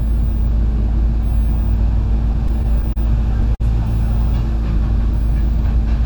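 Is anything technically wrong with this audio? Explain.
Yes, there are two delivery faults.

From 2.33 to 2.98 s the sound drags and stutters in five brief hitches, the longest about 30 ms. These are repeated stalls (stutter): packets kept arriving late, so the jitter buffer repeatedly emptied and the receiver extended the last sound, filling about 64 ms in total, roughly a tenth of that stretch, with nothing lost.

From 3.55 to 3.62 s a single sound is held too long, with a slight buzz or dip. This is a short stall from a late packet: the arrival delay jumped by 50 ms, the buffer ran dry, and the receiver stretched the last sound for 50 ms before resuming where it left off.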